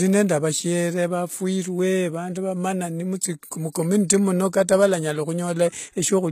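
Throughout the speech, the audio was likely squeezed through HE-AAC compression at a rate that fits roughly 20 kbps. Only the lower spectrum is coded, and the treble is rebuilt from copied bands, leaving plainly audible gritty, lispy sibilance and nothing above 14.9 kHz.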